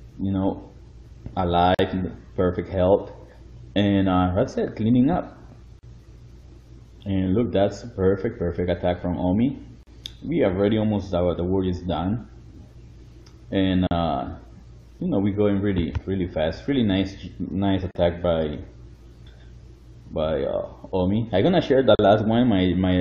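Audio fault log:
1.75 to 21.99 s, gap at a join of encoded pieces: the sound drops out every 4.0 s, at 1.75–1.79, 5.79–5.83, 9.83–9.87, 13.87–13.91, 17.91–17.95 and 21.95–21.99 s, each hole about 40 ms (the first 45 ms), then resumes exactly where it stopped. Separately encoded segments were butted together with their start delay and end-frame padding left in. On the waveform each appears as a flat notch with steep, slightly smeared edges; the spectrogram shows a thin vertical blank stripe across all frequencies.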